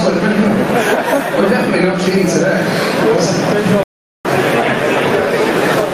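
From the start and right through the clip there's gain pumping, with the level swinging by something like 15 dB. Loud and quiet moments sit squashed close together. The likely cause is input gain set far too hot for the mic, with a fast limiter or compressor clamping down on every peak and releasing in the pauses.

Then at 3.83 s there's a playback stall. The sound just stops mid-flow and the output goes silent for about 0.42 s, until 4.25 s, before picking up again. That's a noticeable gap, long enough to feel like the audio hiccupped rather than a short click or dropout. It's likely the player ran out of buffered data or its thread got blocked, leaving nothing to output until it recovered.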